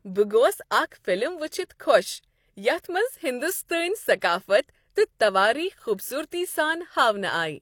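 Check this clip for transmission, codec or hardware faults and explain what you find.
One transmission fault is present. An overlap between stream segments occurs at 5.78 to 5.81 s: two 1.0-second segments claim the same stretch of time, so the player trims about 31 ms of speech that was never duplicated, and the waveform jumps, heard as a brief click or skip.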